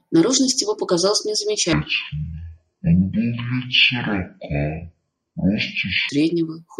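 From 1.73 s to 6.09 s the speech drops to half speed and an octave low, a stereo-read-as-mono fault: interleaved left and right samples are played in sequence as one channel, doubling the sample count, so every syllable drags at 0.5x with pitch lowered 12 semitones.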